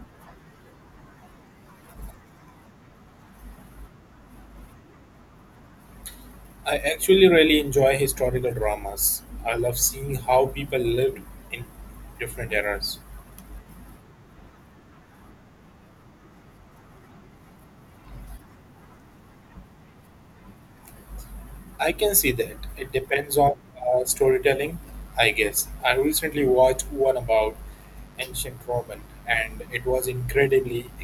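Speech, where from 24.83 s to the end the 50 Hz mains supply couples sharp switching spikes into the signal path twice per cycle. The result is mains buzz: a steady, raspy tone with harmonics reaching into the kilohertz range, roughly 30 dB below the speech.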